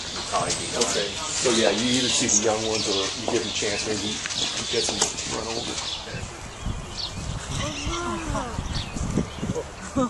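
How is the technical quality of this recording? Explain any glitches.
No glitches come through; the technical quality of this recording holds steady with nothing to explain.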